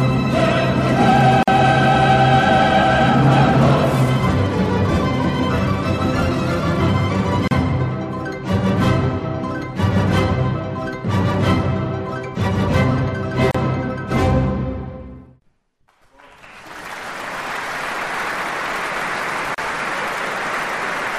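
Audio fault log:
1.43, 7.48, 13.51 and 19.55 s, gap at a join of encoded pieces: separately encoded pieces, recurring every 6 s, were joined without trimming encoder start delay and final-frame padding, so continuous sound drops into silence, about 47 ms first then 34 ms, with smeared edges before resuming.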